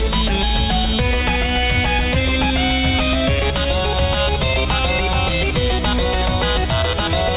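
No technical faults can be heard anywhere in the clip. Nothing in the sound points to a dropout, glitch or other fault in the signal chain.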